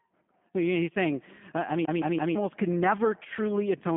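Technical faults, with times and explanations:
Throughout, G.729 codec: the speech was squeezed through a low-rate VoIP coder, consistent with 8 kbit/s, that rebuilds each short frame from a vocal tract model, a pitch predictor and a few pulses. It comes out rough, faintly synthetic and confined to about 150 Hz to 3.5 kHz, with nothing above.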